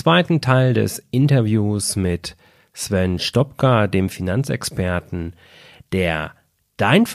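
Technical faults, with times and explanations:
Listening through the speech recording turns up no technical fault. There is nothing here to time or explain.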